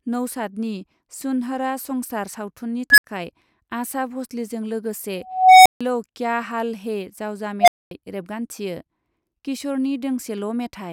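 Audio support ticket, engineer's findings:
Unstable filter, speech path, three events. 2.90–3.04 s: tone near 1.5 kHz swells in 77 ms, clips, then drops to 64 ms of silence. 5.24–5.81 s: tone near 700 Hz, slower 419 ms build, 149 ms silence. 7.61–7.91 s: tone near 700 Hz, 71 ms build, 235 ms silence. Probable component is a recursive EQ or filter stage with bad coefficients, overflowing until it resets. Unlike acoustic feedback howl, each squeal ends abruptly in dead silence rather than sustaining.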